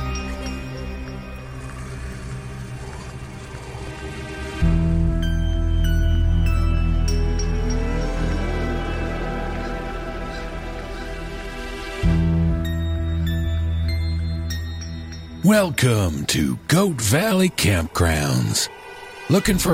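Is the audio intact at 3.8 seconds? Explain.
No. Damaged data in the compressed stream from 3.84 to 3.88 s makes the decoder lose frame sync and resync, producing a brief chirp, squawk, click or short hole.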